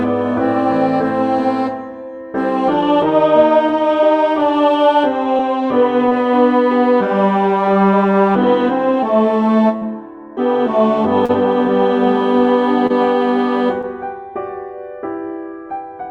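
Short concealed packet loss occurs at 5.37–5.41, 6.09–6.13, 11.25–11.31, 12.87–12.92 and 13.82–13.85 s. Each time, about 20 to 40 ms failed to arrive, and the receiver covered the gap by extending the preceding sound, leaving a brief smear or wobble. On a spectrogram the harmonics flatten into a short, frozen stripe.

A burst of packet loss at 9.77–9.83 s drops about 40 ms. The receiver fills 45 ms with a fading continuation, then skips ahead. The waveform shows a decaying envelope and an abrupt resumption.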